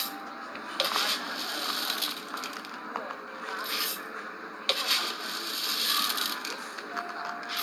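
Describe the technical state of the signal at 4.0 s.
At 4.0 s the everyday sound plays through intact, with no dropout, distortion or other technical fault.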